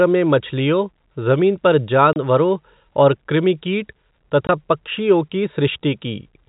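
At 2.13 s and again at 4.47 s, packet loss filled with silence cuts holes in the speech. The gaps last 30 ms and 20 ms, which fits 10 ms packets. Their edges are hard.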